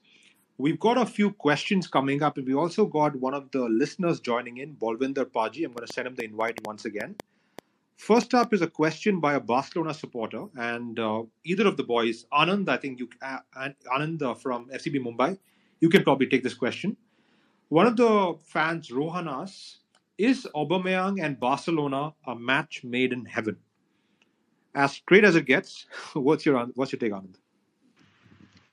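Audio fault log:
5.78 to 8.45 s, train of clicks: about ten sharp, same-shaped ticks arrive at roughly 4.1 per second with uneven spacing, each standing out by about 10 dB above the surrounding sound, so they pop through clearly. The cause is likely interference from nearby equipment or a faulty connection or power supply injecting pulses. Unlike random crackle, the clicks share one shape and cluster in this stretch, and unlike a single dropout click they repeat as a ticking run.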